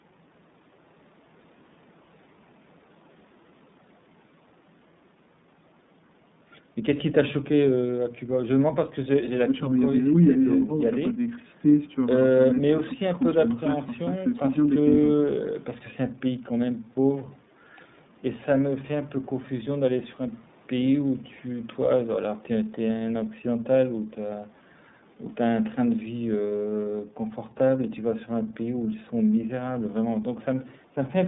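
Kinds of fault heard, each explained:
iLBC codec, throughout: The speech is confined to a narrowband telephone line running from about 150 Hz up to 3.7 kHz, so everything above that is gone. The coder rebuilds each block's excitation on its own, without borrowing from the block before, and the roughness and synthetic edge are plainly audible. The frames are 30 ms, which fits the 13.33 kbps mode.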